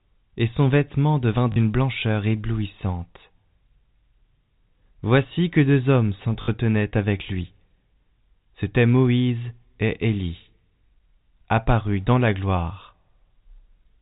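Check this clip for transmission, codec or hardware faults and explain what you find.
Two short dropouts are audible, both packet loss with the last packet repeated, heard through a telephone-band G.711 path whose 4 kHz ceiling is audible.

At 1.52 s, between "et son vêtement devint" and "blancheur éblouissante", a 40 ms robotic stutter buzzes, and at 6.42 s, between "que deux hommes" and "avec lui", a 60 ms one does the same. Each happens when packets go missing and the receiver replays the last good one. The copies don't join in step with the pitch, and the repetition buzzes at a rate that fits 20 ms packets.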